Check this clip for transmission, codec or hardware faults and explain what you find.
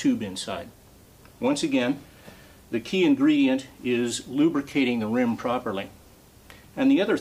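No transmission, codec or hardware faults.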